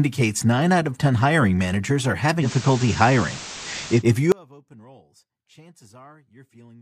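Digital radio blending to analogue runs from 2.40 s to 4.04 s. The receiver lost its digital stream and cross-faded, over about 116 ms, to the station's FM broadcast, then returned. The level shifts by about 3 dB, and a layer of hiss rises to roughly 20 dB below the speech, then recedes at the blend back to digital.

Audio dropout to a faint residue begins abruptly at 4.32 s and lasts to the end of the clip. The speech cuts out mid-flow rather than pausing or fading. What remains is a faint trace of the sound roughly 30 dB below its normal level. This points to the wanted signal being lost while the downstream path stayed live, likely a break in reception or the feed that passed only a weak leak.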